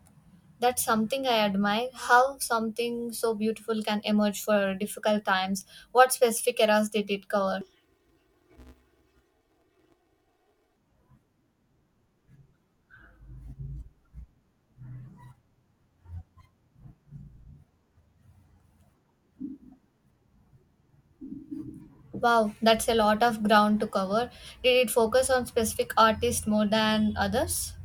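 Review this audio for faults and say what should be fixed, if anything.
Planar audio read as interleaved, from 7.61 s to 10.77 s: the speech turns into a robotic buzz at about 188 Hz, with no clear octave shift. Each block holds all left samples followed by all right samples, but it is read as alternating pairs, so every 5.33 ms block plays twice at double speed, left then right. Blocks this short, which fits 256 samples at 48 kHz, leave the block rate audible as the buzz. Prevent it by matching the reader's sample layout flag to the producer's planar format.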